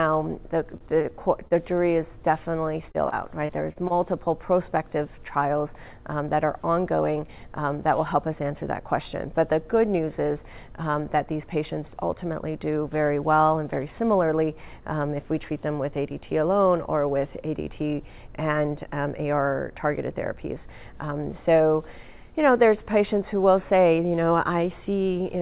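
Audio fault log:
0.77–0.84 s and 1.02–1.13 s, short stall from a late packet: the jitter buffer ran dry, so the last sound is held 36 ms, then 26 ms, before resuming without loss.
1.48–1.54 s, short concealed packet loss: about 30 ms never arrived; the gap is patched by extending the preceding sound, heard as a brief smear before blending back.
2.92–3.93 s, repeated packet loss (robotic sound): five gaps, the longest 29 ms, leave about 13% of the span concealed, giving choppy sound with fragments missing.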